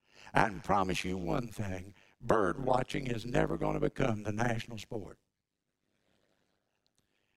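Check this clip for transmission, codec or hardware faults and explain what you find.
One processing fault is present, running through the whole speech recording: overlap-add ripple. The audio was split into windowed frames and reassembled with an overlap whose windows do not sum to a constant gain, so the level dips and recovers once per frame, around a hundred times a second. The swing is deep, about 60 dB, which turns the speech into a harsh, buzzy, robotic tremolo rather than a gentle flutter.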